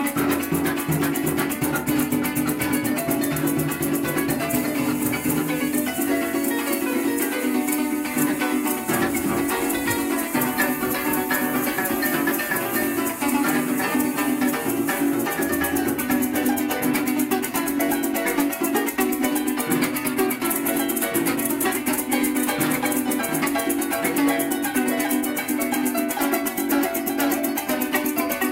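No technical faults are audible anywhere in the audio.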